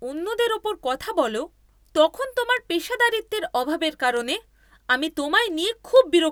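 From 0.17 s to 6.16 s there are word clock ticks running under the speech at a steady rate, about one every fifth of a second, around thirty in all. The receiving device isn't locked to the sender's clock, and an offset of roughly 100 ppm would fit that rate. Each slip drops or repeats a single sample.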